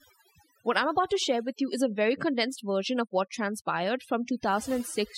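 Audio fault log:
Throughout: overdone noise removal, bands near the noise floor gated away, leaving near-silent gaps with twinkling specks; spectrogram shows patchy, speckled holes.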